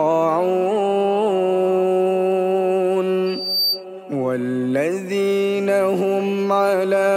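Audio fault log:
3.26–3.85 s: loudspeaker feedback squeal. A single tone at 4.6 kHz rises out of the sound and swells over roughly a third of a second into a piercing squeal that sits at about the same level as the programme before it cuts off at 3.85 s. A microphone is hearing the loudspeaker it drives, and at 4.6 kHz the gain around that loop exceeds unity, so the tone reinforces itself on every pass until the loop is broken.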